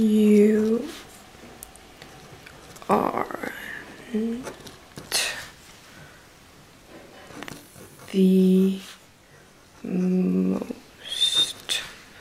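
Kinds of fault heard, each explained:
Channel delay (comb filtering): from 7.57 to 10.56 s one channel lags by about 20 ms, and the mono sum cancels at evenly spaced frequencies starting near 20 Hz. The sound turns rough and slightly doubled. A spectrogram shows fixed, closely spaced horizontal notch stripes across that span.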